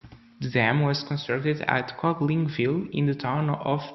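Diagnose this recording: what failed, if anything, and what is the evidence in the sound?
Nothing failed: no stage of the chain, from capture through to playback, leaves any audible trace of trouble in this speech recording.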